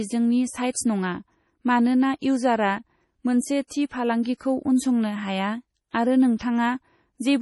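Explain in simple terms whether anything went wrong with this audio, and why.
Heavy data-saving, likely from MP3 compression, squeezed this speech recording throughout. To save space, the encoder threw away everything above 11.5 kHz and dropped quieter detail, so the voice sounds dull, watery and swirly, with metallic chirps on s sounds.

Pre-echo comes from that same squeezing. Noise meant to hide behind a sudden loud sound spreads into the quiet moment just before it, so a short hiss arrives early and attacks sound soft. It happens at 0.71–0.75, 3.67–3.71, 4.23–4.25, 4.37–4.41, 5.89–5.94 and 6.39 seconds.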